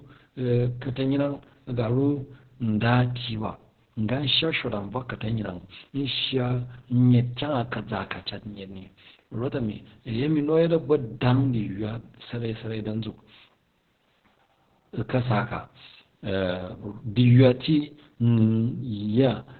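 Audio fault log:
Throughout: Opus voice compression. Nothing above 4.3 kHz survives, so the speech sounds muffled and narrowband, and coarsely coded excitation makes it hoarse and slightly robotic. The heavy damage points to the SILK linear-prediction mode at a very low bitrate, around 8 kbps.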